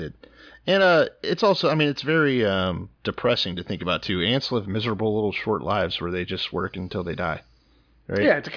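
A speech recording with no technical faults to report. Nothing in it calls for a time or a cause to be noted.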